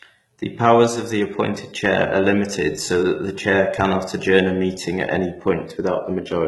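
Throughout, the s sounds turn gritty and lispy over a bright but synthetic-sounding treble, likely HE-AAC compression rebuilding the top band from copied lower bands, consistent with a bitrate around 16 kbps.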